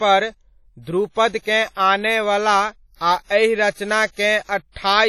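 Speech with heavy WMA compression damage throughout: ringing, washy smearing and signal-dependent hiss, nothing above 17.3 kHz, likely from a low-bitrate encode near 32 kbps.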